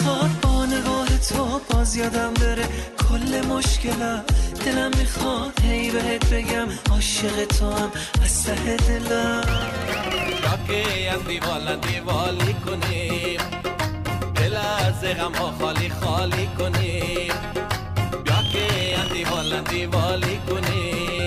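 Near the end, from about 18.44 to 19.39 s, the audio picks up a robotic rattle at roughly 43.1 Hz: buffer tearing. The writer and the hardware reader of the ring buffer have drifted so they cross every period, leaving a small slice of each buffer holding audio from about 50 ms earlier, with hard joins on either side. That repeat rate fits a 1024-sample buffer, and the rattle rides only on the signal.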